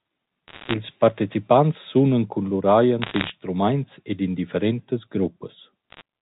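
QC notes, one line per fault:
0.48–0.74 s, 3.02–3.30 s and 5.90–6.02 s, bit errors on a digital phone line: short bursts of sharp ticks and crackle over the G.711 mu-law speech, from flipped bits corrupting single samples, with the densest burst first (roughly 1.5%) and the last lightest. On the waveform they appear as isolated one-sample spikes; on a spectrogram, as thin full-band vertical lines up to the 4 kHz ceiling.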